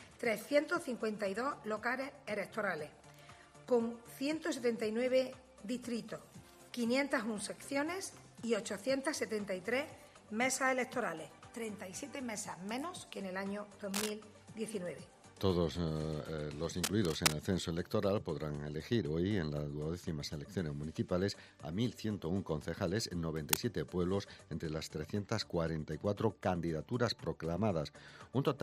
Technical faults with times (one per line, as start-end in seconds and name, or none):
13.94-14.10 cable scratch noise
16.83-17.36 cable scratch noise
23.36-23.57 cable scratch noise